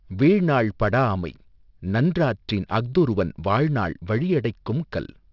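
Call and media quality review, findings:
Aliasing throughout: sibilants gritty, metallic. Likely resampler, 44.1 kHz down to 12 kHz without anti-alias filter; content above 6 kHz folds back roughly 30 dB down. Spectrogram: energy mirrored, running hard to 6 kHz edge.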